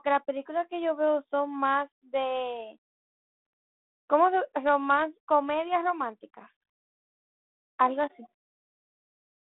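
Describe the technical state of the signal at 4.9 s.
At 4.9 s the signal is intact, with no dropout, click or distortion, just the narrow telephone band of 32 kbit/s G.726 coding with nothing above about 3.9 kHz.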